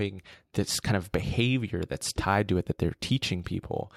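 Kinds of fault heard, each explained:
Sample clock jitter: From about 2.19 s, right after "kind of behavior that's", and running to the end, a fine hiss and grainy roughness clings to the speech. It thickens on louder and brighter sounds and falls away in the pauses. The converter's clock is wobbling by a few microseconds, so each sample lands slightly off time. Steep parts of the waveform turn that timing slip into noise, here roughly 35 dB below the speech.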